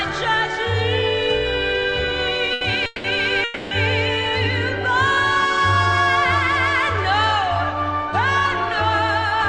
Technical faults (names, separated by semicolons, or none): short stall from a late packet; call audio freeze